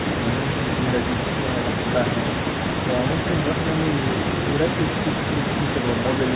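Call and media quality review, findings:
Nothing to flag here: the speech sounds like an ordinary narrowband call, with the G.711 A-law leg at 64 kbps topping out at 4 kHz and the mic processing trimming the lowest bass, both as expected.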